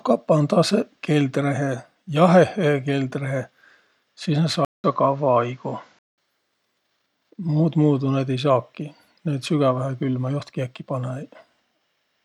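An input switch to a poorer device runs from 4.65 s to 6.18 s in this speech, opening with a gap of about 0.19 s. The cause is likely a change of capture path mid-recording. For that stretch nothing reaches above 7.6 kHz, so the speech turns duller and loses its airy top. A faint new background noise sits roughly 45 dB below the signal, and loudness stays about the same. Full bandwidth returns at 6.18 s.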